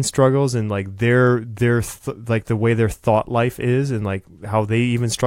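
A short bit of speech, and nothing technically wrong with it can be heard anywhere in the recording.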